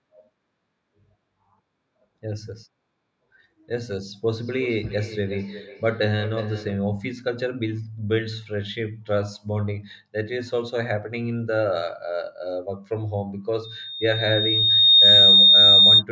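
From 4.31 to 6.85 s there is feedback echo between two devices. Speech returns every 0.4 s or so, thin and ringing, about 22 dB below the voice.

From 13.64 to 16.03 s a loudspeaker feedback squeal builds at 3.7 kHz. It swells over roughly a second and a half, ending about 15 dB above the speech.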